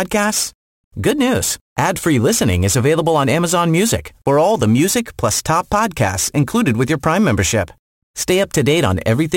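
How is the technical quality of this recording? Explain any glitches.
The recording has a persistent fault throughout. Crude rate conversion, likely 48 to 44.1 kHz by picking nearest samples without filtering, leaves inharmonic errors about 20 dB below the speech, heard as gritty fizz on louder, brighter sounds.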